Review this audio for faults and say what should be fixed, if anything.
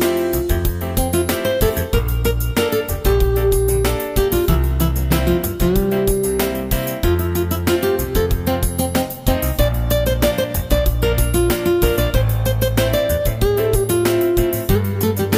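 Nothing to fix: no audible faults anywhere in the audio, so it can stay as is.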